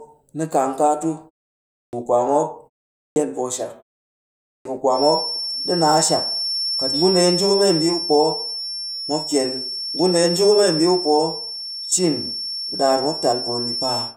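At 1.75, 2.95 and 4.46 s, speech returns from pauses of about 0.5, 0.3 and 0.7 s with its opening missing: this is a clipped start after a pause. The output device dozes in the silence and needs roughly 180 to 210 ms to wake, so each onset is swallowed and the word lurches in abruptly. On a waveform the envelope jumps from flat to full amplitude with no rise, and a spectrogram shows the first phoneme cut away.

From 4.89 s to the end, a feedback whistle sits behind the speech: a thin tone at one pitch, 5.4 kHz, that swells and fades slowly in level and stays only a little below the speech. It likely comes from a loudspeaker-to-microphone loop held just short of runaway. On a spectrogram it appears as a single horizontal line at 5.4 kHz.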